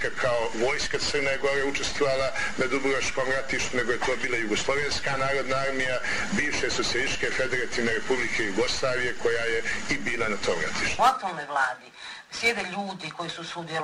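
Listening through the audio, nothing stood out as a technical fault at any point.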